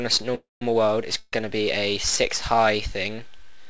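Audio carried over a call link with nothing above 8 kHz, consistent with G.722. There are two call audio freezes, at 0.35–0.63 s and 1.19–1.35 s, where the sound trails into a fading buzz and then resumes intact, likely from delayed packets draining the jitter buffer.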